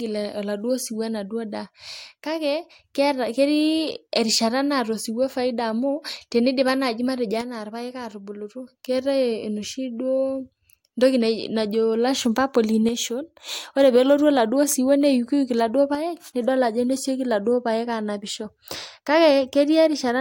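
The speech level abruptly sinks about 6 dB at 1.66–2.84, 7.41–8.68, 12.89–13.49 (just before "ore pelotu") and 15.95–16.35 s, likely one channel dropping out before the mono sum.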